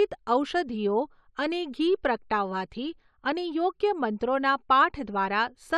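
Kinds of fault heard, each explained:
No technical faults turn up anywhere in this speech recording, so there's nothing to list.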